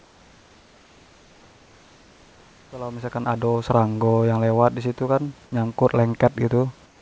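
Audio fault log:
0.00–2.72 s and 6.86–7.02 s, comfort noise in place of the background: In both pauses the room noise gives way to a smoother, steadier hiss. It sits about 3 dB lower in the first pause and about 4 dB lower in the second. The background there is about 32 and 34 dB under the loud passages. The likely cause is discontinuous transmission. The sender stops during silence, and the receiver fills the gap with synthetic noise. A fade-in from about 2.5 s to 3.66 s overlaps the first pause.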